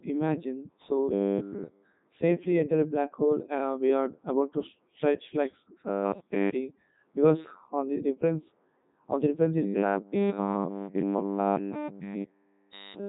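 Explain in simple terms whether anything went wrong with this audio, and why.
Codec 2 vocoder damage runs through the whole clip, from start to finish. The speech sounds robotic and buzzy because it was rebuilt from rough pitch, loudness and tone settings rather than the real sound wave, and nothing is heard above 3.8 kHz, so it also sounds muffled.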